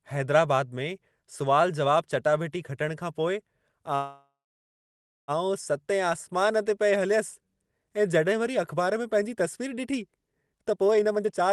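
At 3.95 s, right after "चटाभेटी खटण खां पोइ", a call audio freeze holds the speech until 5.31 s, likely from packets stalling so the jitter buffer ran dry. The last sound carries on as a fading buzz, then about 0.97 s of silence, showing as a flat gap on the waveform and an empty band on the spectrogram. The speech resumes intact, about 1.33 s later than it would have.

From 10.50 to 11.52 s a jitter buffer speed-up shrinks the backlog by cutting out short pitch-period pieces, roughly 0.4 s in total. The speech plays at 139% with unchanged pitch, sounding rushed, and the waveform's syllables crowd closer together.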